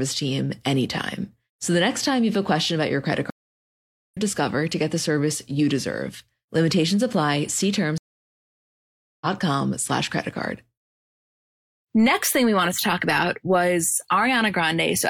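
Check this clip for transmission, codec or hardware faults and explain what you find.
Two stream reconnects break this speech clip. The first runs from 3.3 to 4.17 s and the second from 7.98 to 9.27 s. Each time, the connection dropped and the player stalled. It then reconnected and started a new decoder partway through the stream. Each break is heard as a gap of silence, about 0.82 s and then 1.23 s long. The speech then resumes at a later point, skipping roughly a second after the first gap and roughly 0.7 s after the second, so material is simply missing.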